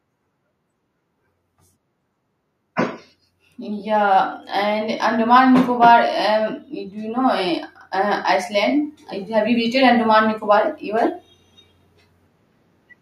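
From 3.58 s to 11.17 s the level climbs steadily by about 13 dB, a case of automatic gain rising: the gain control judged the input too quiet and kept turning it up. Speech and background noise swell together over those seven-plus seconds.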